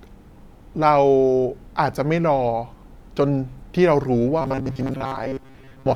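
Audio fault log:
4.42 to 5.96 s, robotic sound from repeated short buffers: the speech turns into a stiff, metallic buzz at 134 Hz that still loosely follows the talking. The player was likely looping a tiny chunk of about 7.5 ms and skipping most of the real audio.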